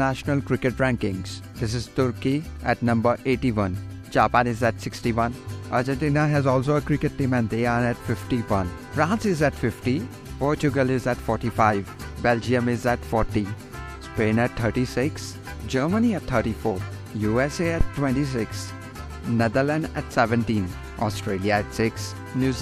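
At 17.81 s a phantom power thump cuts in and is gone by 17.90 s: a short, deep thud that dies away within about 20 ms. It comes from a supply voltage being switched on a live input, with the sudden DC step pushed through the coupling capacitors. On the waveform it shows as an abrupt lopsided excursion that settles quickly. A spectrogram shows a brief burst of energy packed into the lowest frequencies.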